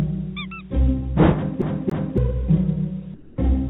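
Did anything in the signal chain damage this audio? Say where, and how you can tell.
Yes. At the playback stage the disc read got stuck on one turn, as with a CD stuck on one turn: from 1.62 to 2.18 s the same 280 ms stretch repeats twice, each pass ending in a brief mute as the laser jumps back, giving an even, mechanical stutter.

From 3.14 to 3.38 s the real background, sitting about 25 dB below the loud parts, gives way to 240 ms of steady, featureless hiss about 6 dB quieter. The likely cause is call processing with discontinuous transmission inserting comfort noise in place of the background.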